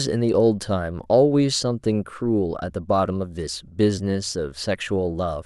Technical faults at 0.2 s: none

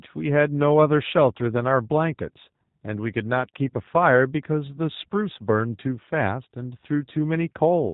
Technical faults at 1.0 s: G.729 codec

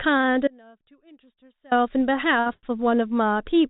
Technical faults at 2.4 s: short stall from a late packet

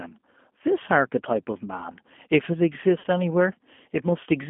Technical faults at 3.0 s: G.729 codec; VoIP packet loss concealed by the speech codec

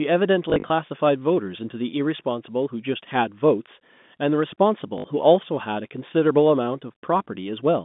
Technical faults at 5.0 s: packet loss with last packet repeated

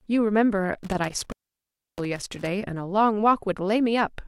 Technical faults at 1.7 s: intermittent contact

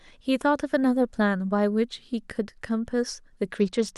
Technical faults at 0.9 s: none

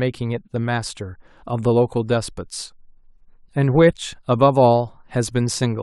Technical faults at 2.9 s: none

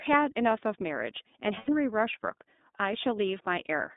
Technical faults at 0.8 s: iLBC codec

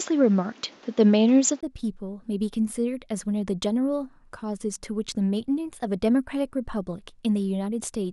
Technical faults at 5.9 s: none

